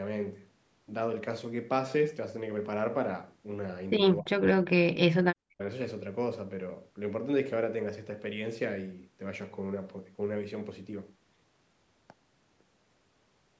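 From 4.2 to 4.76 s and again from 5.44 to 5.62 s, the speech dips sharply and breaks up, falling almost to silence at its deepest. This is speech suppressed in double talk, likely an echo canceller that confused the talker with loudspeaker echo while both sides spoke.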